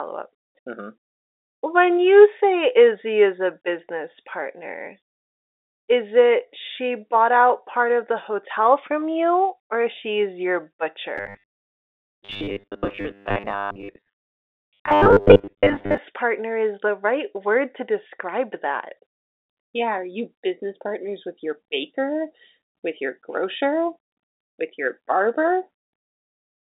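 From 11.18 to 15.98 s, right after "you or she's your" and until "partner is the right", the speech turns into robotic sound from repeated short buffers. A rigid, metallic buzz at 100 Hz sets in. The words stay roughly traceable. The likely cause is audio arriving too slowly, so the software loops a short chunk of about 10 ms. Most of the real audio in that stretch is skipped. The phone-band sound, cut above 3.7 kHz, stays the same throughout.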